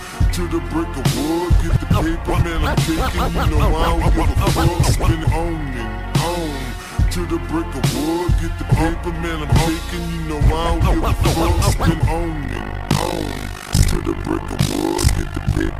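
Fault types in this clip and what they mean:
Overlap-add ripple, from 12.44 s to the end: the sound was split into windowed frames and rejoined with an overlap whose window gains fail to add up to a constant, so the level swings once per frame. Here the swing is extreme, about 60 dB deep, and repeats around 50 times a second, giving a harsh, buzzing flutter, almost a robotic chopping, over the last three seconds or so.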